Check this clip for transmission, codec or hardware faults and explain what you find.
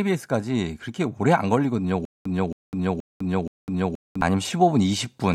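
There's one fault in this speech. From 2.05 to 4.21 s there's a stutter with silent gaps: a 273 ms fragment repeats four times with 202 ms of dead silence between, likely a stalled stream retrying.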